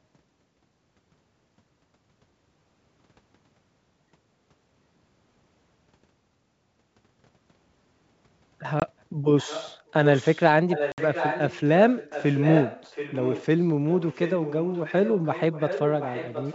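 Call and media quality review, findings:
Packet loss on an ADPCM call, 8.80–8.83 s and 10.92–11.00 s. Hard silent gaps of 20 ms and 60 ms, about one and three packets. Decoder predictor and step size desynchronise. Speech resumes with brief, slight distortion.

Echo leak, 9.38–10.44, 10.69–11.60, 11.89–13.46, 13.89 s to end. Delayed copy of speech, 722 ms behind. Level varies from faint to nearly as loud as the speech. Likely cause: far-end loudspeaker and incomplete echo cancellation. Wideband G.722 path clean.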